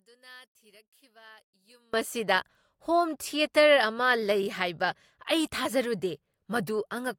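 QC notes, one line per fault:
0.00–1.94 s, one channel inverted: in mono the speech drops by about 29 dB to a faint residue, likely because one stereo channel has reversed polarity, so the centred voice common to both channels cancels when summed, leaving only their small difference.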